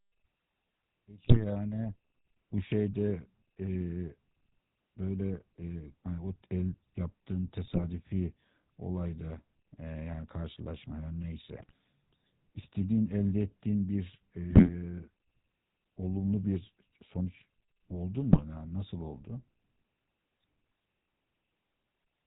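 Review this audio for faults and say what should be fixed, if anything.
The whole clip carries the sound of the GSM full-rate codec. The speech has that buzzy, gravelly edge, which fits the old 13 kbps full-rate coder. It rebuilds the voice from a vocal-tract model driven by sparse, evenly spaced pulses, so the fine texture between them is lost. Everything above 4 kHz is gone too, which leaves it dull and rough. To prevent it, capture or route the audio over a wideband path rather than a GSM leg.

There are also five bursts of GSM bit errors, at 1.22–1.45 s, 7.64–7.84 s, 11.52–11.73 s, 14.50–14.70 s and 18.31–18.41 s. Each one breaks into squawks, pops and a gargly smear lasting about a tenth to a quarter of a second. Corrupted bits in the filter, pitch and gain values made the decoder bend the spectrum and jump the level for five to twelve frames at a time. The error rates point to a few percent of bits flipped, which fits a weak radio link. 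To prevent it, record from a strong-signal connection or a clean source.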